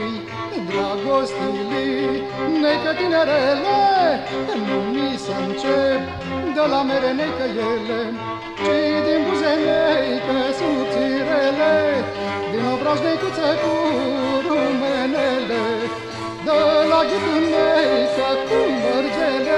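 No faults detected anywhere in the recording.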